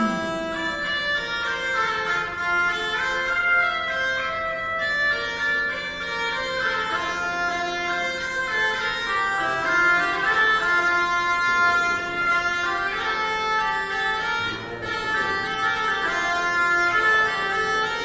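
The audio runs the whole way through at a wrong sample rate: speed drops to 0.667 times and pitch falls about 7 semitones, which fits 24 kHz material played at 16 kHz. On a spectrogram everything sits lower in frequency and stretches out in time.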